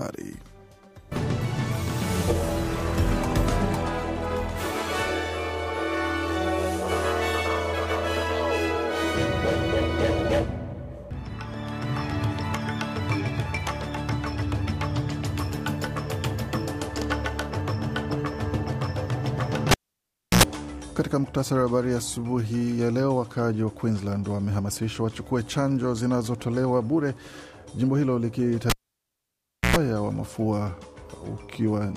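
At 19.71 and 28.70 s, a cable is pulled and plugged in. A pop drops the sound out for 0.67 s, then 1.01 s. A 60 Hz buzz and a second pop mark reconnection.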